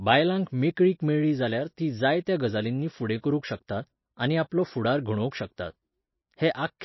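Speech, with MP3 compression audible throughout: nothing above 5.8 kHz, plus watery, swirling artefacts that a plain low-pass filter wouldn't cause, likely from a bitrate near 26 kbps.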